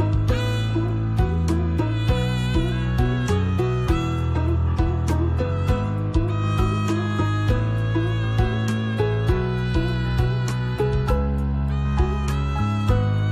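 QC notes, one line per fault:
No faults detected.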